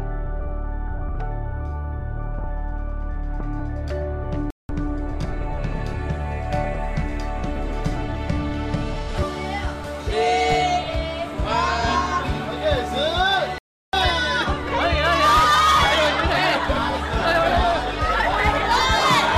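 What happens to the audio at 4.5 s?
At 4.50 s the sound cuts out into dead silence for about 190 ms, resuming at 4.69 s. This is a playback stall: the player most likely ran short of data or had its thread blocked, so output halted until it recovered.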